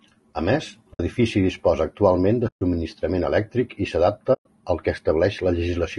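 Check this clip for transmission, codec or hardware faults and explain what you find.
The clip has two faults: codec damage throughout and three short dropouts.

Low-delay AAC compression, audible across the whole clip: the speech sounds rough and grainy, with noise filling the gaps between harmonics and a thin, synthetic top band. This is likely AAC-ELD, whose short frames resolve pitch poorly, starved at a rate that fits about 32 kbps.

AAC frame loss with muting, at 0.93 to 1.00 s just before "disposa actualment de", at 2.47 to 2.62 s just after "disposa actualment de", and at 4.33 to 4.46 s between "elèctric i" and "al que". Lost frames are decoded as silence, and the overlapping windows fade the sound out and back in, leaving soft-edged holes. The gap lengths fit runs of 20 ms frames.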